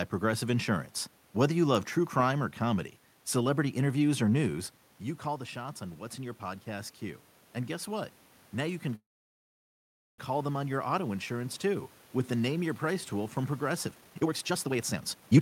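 From 4.5 s to 11.66 s, automatic gain rising: after the input falls about 11 dB, gain climbs about 7 dB, lifting voice and room noise together, unlike a talker simply moving closer.

At 8.95 s a call audio freeze sets in: the last sound stretches into a fading buzz, then about 1.15 s of silence until 10.2 s. The likely cause is delayed packets. Nothing is lost, unlike a dropout.

From 13.86 s to 15.4 s, jitter buffer speed-up runs the audio at about 162% speed with unchanged pitch, roughly a second trimmed away, so it sounds hurried rather than chipmunk-like.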